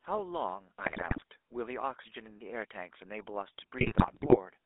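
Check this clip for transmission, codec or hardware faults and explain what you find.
Two faults are present: GSM full-rate coding throughout, and GSM bit errors in two bursts.

Throughout, the GSM full-rate codec's pulse-driven vocal-tract model within a 300 Hz to 3.6 kHz band gives a buzzy, gravelly roughness, which fits a 13 kbps rate. Plain band-limiting would sound muffled but smooth, not gritty.

From 0.84 to 1.23 s and from 3.78 to 4.37 s, GSM bit errors corrupt the decoder's filter, pitch and gain values, producing squawks, pops and gargling. Packet loss would leave gaps or repeats instead.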